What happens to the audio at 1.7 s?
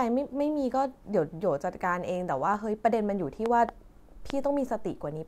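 Nothing goes wrong at 1.7 s: the speech runs through that moment intact, with no dropout, click or distortion.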